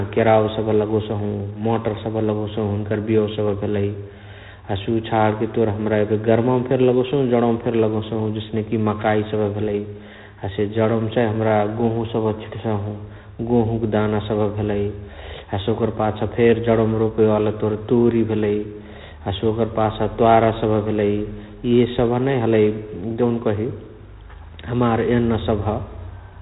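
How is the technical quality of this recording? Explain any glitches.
The quality is limited by one fault throughout. G.726 ADPCM coding damage is plainly audible for the whole clip. The codec sends a few bits per sample of prediction error. The harsh, rasping hiss tracks the speech level, which fits 24 kbit/s. Nothing passes above 3.8 kHz.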